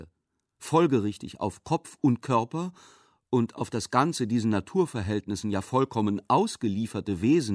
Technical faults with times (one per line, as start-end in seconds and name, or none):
none